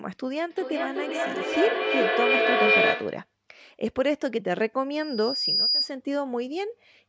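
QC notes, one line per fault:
0.50–3.34 s, feedback echo between two devices: the speech returns roughly every 0.4 s, thinner and more ringing each pass. A second device in the room replays the call and its microphone recaptures it. The repeats reach about 4 dB above the speech, so they pile up rather than fade.
4.96–5.91 s, loudspeaker feedback squeal: a single 4.9 kHz tone swells over roughly 0.7 s into a piercing whistle, peaking around 5 dB above the signal. The microphone hears its own loudspeaker, and at that frequency the loop gain exceeds one, so the tone feeds itself.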